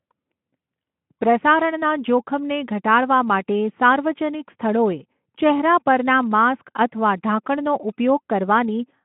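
No technical faults can be heard anywhere in the speech. It comes through a Speex link at about 15 kbps, confined to a telephone-style band of roughly 150 Hz to 3.4 kHz, with only a light trace of the codec's coding grain on the sound.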